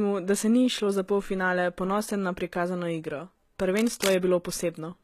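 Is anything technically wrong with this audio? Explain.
Yes. The speech has two technical faults.

Throughout the clip, the treble sounds synthetic and nothing is present above 14.9 kHz. The top octaves remain bright, but the s sounds come across gritty and metallic, and the harmonics do not join cleanly with the lower range. This is likely HE-AAC compression at a low bitrate, around 20 kbps. The codec encodes only the lower spectrum and rebuilds the treble by copying lower bands upward. That is why the sound is metallic rather than merely dull, as it would be with simple low-pass filtering.

From 3.77 to 4.13 s, a dense, uneven burst of scratching and rustling sits over the speech at only slightly below its level. This is likely cable scratch noise. A worn cable, connector or control is moved, and its contact resistance changes rapidly. The irregular, crackly texture over about a third of a second sets it apart from a single click or a steady hiss.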